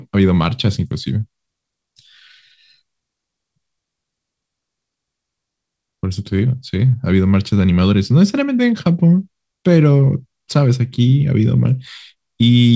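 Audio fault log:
No faults logged; the speech carries the expected wideband call-codec character with nothing above 8 kHz, consistent with G.722 on a WebRTC call path working as intended.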